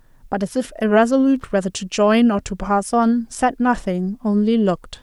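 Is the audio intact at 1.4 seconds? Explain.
No. From 1.36 to 1.47 s there is loose connector crackle: a worn contact making and breaking chops the speech into an irregular scratchy burst, unlike a single clean digital click.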